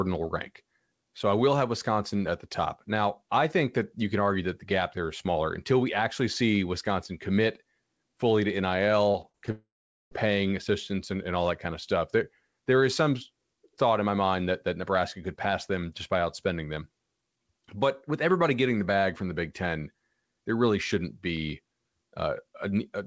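Speech that breaks up twice in quick succession. From 9.12 to 9.49 s there is repeated packet loss (robotic sound): four short holes, the longest about 41 ms, each patched by stretching the preceding sound, so about a quarter of that span turns choppy while the speech keeps moving. Right after, from 9.51 to 10.13 s, a longer gap sounds like a long network dropout, likely a stall in arriving audio. Rather than brief stutters, the last sound smears into a fading buzz or hiss, then roughly 0.43 s of silence, and the speech resumes with about 0.6 s missing. Across the clip nothing is heard above 8 kHz, which fits a G.722 call link at 64 kbps.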